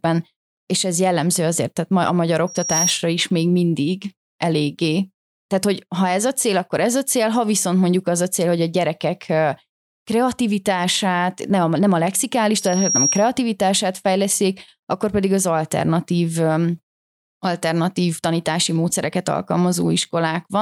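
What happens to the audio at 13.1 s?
At 13.1 s the speech is caught in a loudspeaker feedback squeal, running from 12.57 s to 13.32 s, just after "a nem a lexikális". The microphone is picking up the loudspeaker it feeds, and at 5.7 kHz the loop gain exceeds one, so that frequency reinforces itself. A thin, piercing tone swells over a little under half a second until it sits a few decibels above the speech, then cuts off.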